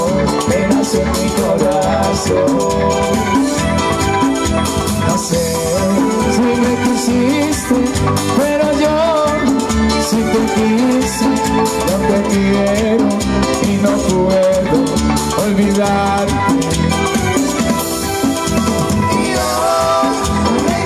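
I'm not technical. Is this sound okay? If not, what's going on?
Yes, it sounds fine; nothing here needs fixing.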